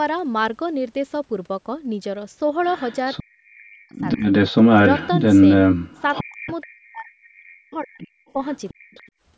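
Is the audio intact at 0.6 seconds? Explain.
Yes, the speech at 0.6 s is intact, with no fault at that moment.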